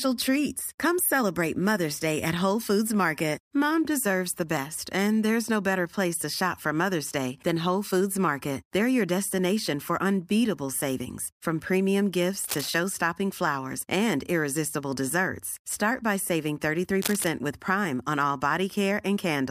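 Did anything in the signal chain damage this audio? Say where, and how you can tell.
Yes. Cable scratch noise appears from 12.44 to 12.69 s and again from 17.02 to 17.28 s: dense, irregular bursts of crackle and rustle laid over the speech, each lasting about a quarter of a second, the second noticeably louder, close to the speech level. The stage is the analogue wiring, likely a worn connector or cable being moved, so its contact resistance jumps about rapidly and injects that ragged noise into the signal.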